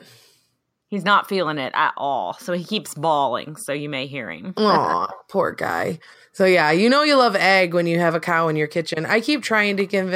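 No technical faults can be heard in this recording.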